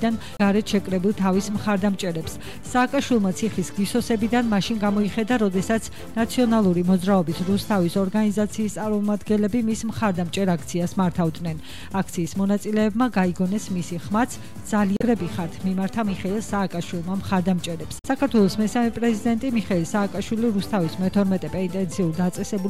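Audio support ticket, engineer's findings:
Damaged data in a compressed stream: short glitches at 0.36–0.41 s, 14.97–15.02 s, 17.98–18.05 s. Decoder misreads corrupt frames, resyncs on next header.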